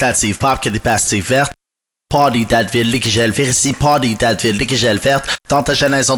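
In this music clip, a resampler restarted on every block, converting 24 kHz to 48 kHz in 20 ms chunks, leaves edge errors that buzz at 50 Hz throughout, only while signal is present.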